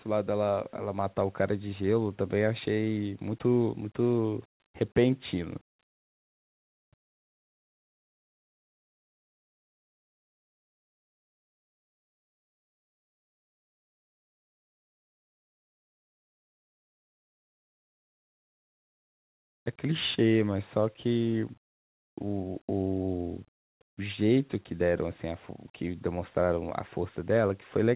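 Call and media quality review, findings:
No faults found.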